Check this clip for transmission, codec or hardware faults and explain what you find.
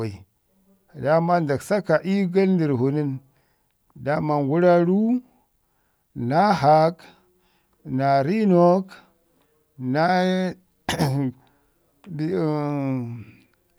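No faults detected.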